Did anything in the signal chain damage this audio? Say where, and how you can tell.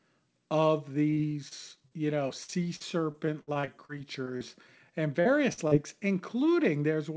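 Yes. The damage happened on the network leg of the call, with the receiver's packet-loss concealment papering over the holes. The codec path itself, which sounds like a G.722-style wideband link with nothing above 8 kHz, isn't the problem. Repeated packet loss (robotic sound) runs from 1.10 to 1.93 s, with five gaps totalling about 120 ms, the longest 30 ms. It returns from 2.29 to 4.57 s, with thirteen gaps totalling about 380 ms, the longest 61 ms. Roughly a sixth of each stretch is synthetic continuation of the previous sound, so the speech turns choppy, with pieces dropped.

Short concealed packet loss appears twice: 5.21 to 5.27 s and 5.67 to 5.73 s, each losing about 40 ms. Here the jitter buffer's concealment extended the last pitch period, or shaped noise for unvoiced sound, across the hole and then crossfaded back into real audio. Each event is heard as a brief smear or wobble, and a short consonant inside that window can disappear entirely.

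A burst of packet loss sits at 5.53 to 5.59 s, where about 40 ms of consecutive audio failed to arrive in time. The receiver held the last sound and faded it as the gap went on, which produces a short sustained buzz or fading hiss in place of real speech. Playback then resumes further along, and the content that fell inside that window is simply gone.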